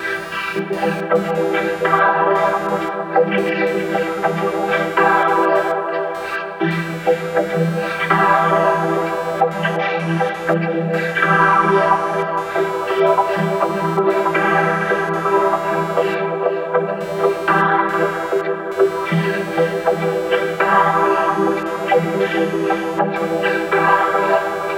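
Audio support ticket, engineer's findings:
Computer activity noise, present the whole way through. Buzzy, chirpy pulsing at around 200 Hz, roughly 20 dB under the sound, tracking machine load rather than the audio. Processor or graphics load disturbing a shared ground in the audio path.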